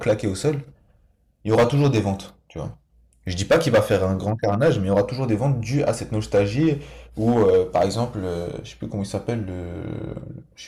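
Hard clipping shows up five times: 0.08–0.49 s, 1.49–2.09 s, 3.41–5.90 s, 6.35–6.68 s and 7.27–8.03 s. The speech overruns what the stage can pass, so peaks are sliced flat. About 5–6 dB over gives peak crackle, and the roughly 12–13 dB stretches turn harshly fuzzy.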